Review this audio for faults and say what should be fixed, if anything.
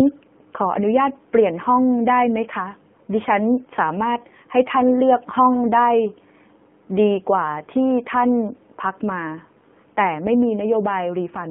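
The whole clip runs through an AMR narrowband mobile codec, the old 2G/3G phone path. Everything sits in a 150 Hz to 3.4 kHz band, so the speech loses its low body and all its air above that. The codec damage is plainly audible, with a buzzy, synthetic edge that points to one of AMR-NB's lower modes, around 7.4 kbps. To avoid it, capture or route the call over a wideband path, or at least AMR-NB's highest mode.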